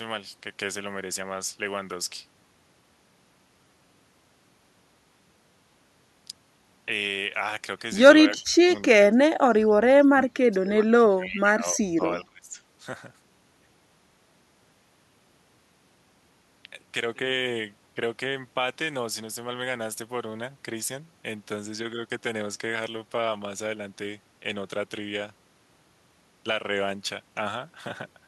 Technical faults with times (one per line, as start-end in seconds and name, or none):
8.29-9.71 speech suppressed in double talk
10.10-12.59 speech suppressed in double talk